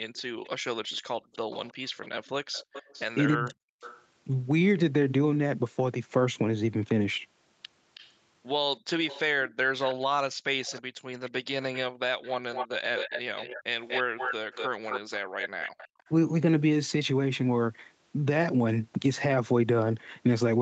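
Echo leak, 0.15 to 4.04 s: a faint delayed copy of the speech trails the talker by 320 ms, roughly 20 dB below it. The likely cause is a far-end loudspeaker whose echo canceller failed to remove what its microphone picked up, so that residue was sent back down the line.

Background gated by the echo canceller, 1.18 to 1.33 s: the room sound dips by about 28 dB for 150 ms and then returns. The canceller clamped the microphone while the loudspeaker played, briefly muting the ambience.

Speech suppressed in double talk, 3.36 to 3.82 s: the talker's level falls by around 40 dB for about half a second. With both sides talking at once, the canceller likely could not tell the near voice from the echo and turned both down.

Echo leak, 7.94 to 8.13 s: a short scrap of the same 320 ms echo slips through, about 25 dB under the speech, most likely because the canceller again left residue unremoved.

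Echo leak, 9.07 to 16.09 s: a much stronger and longer echo follows at a 241 ms delay, only about 10 dB below the talker, likely again residue the canceller did not remove.

Speech suppressed in double talk, 10.29 s: a brief dip of around 20 dB, lasting a few hundredths of a second, nicks the speech. This is likely the canceller ducking during overlapping talk.

Background gated by the echo canceller, 10.91 to 11.06 s and 15.25 to 15.98 s: the background drops by about 40 dB, for roughly 150 ms each time, while the canceller holds the microphone down. The ambience then snaps back. Throughout, the band stops at 8 kHz, as expected from the call processing and the Opus coding.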